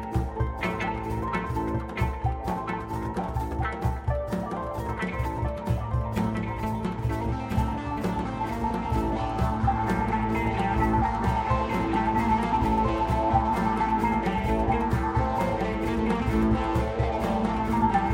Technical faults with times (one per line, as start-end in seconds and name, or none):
0.00-18.14 doubled audio track